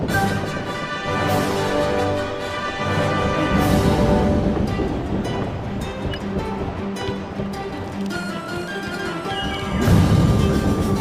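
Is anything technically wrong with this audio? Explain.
No, no technical faults here.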